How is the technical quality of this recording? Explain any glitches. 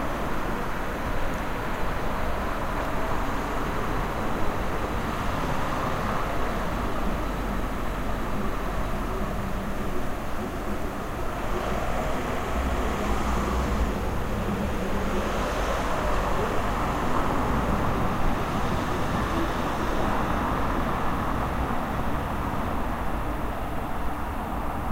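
There's one glitch. At 2.85 s there's a repeated buffer: new audio arrived late, so a tiny 1.45 ms piece, fitting a 64-sample buffer, played twice more, giving a quick click or buzz.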